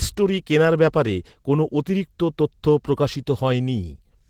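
Throughout the speech, Opus voice compression leaves a plainly audible hoarse, slightly robotic texture. The lower band sounds like a linear-prediction coder rebuilding the voice from a coarse excitation, with a separate transform layer above 8 kHz, a hybrid arrangement that fits a bitrate around 16 kbps in 20 ms frames. Although this codec narrows the band as it runs short of bits, here it keeps content up to about 20.2 kHz, so the damage is roughness rather than muffling.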